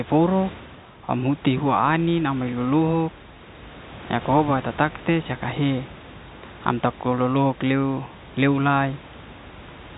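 No technical faults can be heard anywhere in the recording. The sound carries the narrow band of G.711 telephone coding, with nothing above about 3.8 kHz, and the room noise sits roughly 19 dB below the speech.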